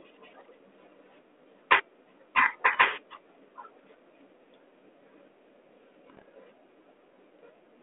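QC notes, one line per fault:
2.37–2.48 s and 6.10–6.22 s, bit errors on an ADPCM link: flipped bits in the 32 kbit/s G.726 stream, a rate typical of a DECT cordless phone, throw the decoder's step size and predictor off, so each hit rings on as pops and rough, gritty bursts with brief level jumps. The second run is denser. On the waveform these show as spiky, uneven amplitude steps. On the spectrogram they appear as vertical broadband smears confined below 4 kHz.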